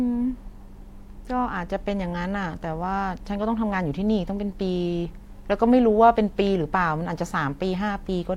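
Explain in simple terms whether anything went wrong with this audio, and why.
Nothing went wrong with this audio, because no dropout, glitch or other fault can be heard anywhere in the recording.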